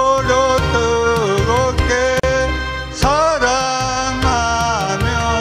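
Separately encoded pieces were joined untrimmed at 2.20 s, leaving a gap at a join of encoded pieces: a 37 ms gap, its edges smeared into a shorter silence, before the sound resumes where it stopped.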